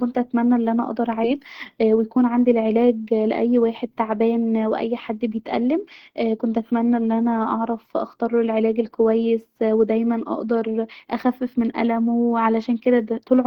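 Right after "اتمني ان انا اقدر", at 1.23 to 1.25 s, the speech lurches forward with no gap, and roughly 0.7 s of material is simply gone, the two sides butted together. This is a skip ahead: audio was discarded in transit or by an overflowing jitter buffer while later audio was queued.

From 1.33 to 2.24 s, leading into "عندي العلاج", the speech runs about 7% fast at unchanged pitch, sounding slightly hurried. From 3.22 to 3.47 s, between "عندي العلاج" and "واحد تعبان واي حد", it rushes harder, about 15% fast. Both are jitter buffer speed-up: with surplus audio buffered, the receiver repeatedly cut pitch-period-sized pieces, removing roughly 70 ms and 50 ms respectively.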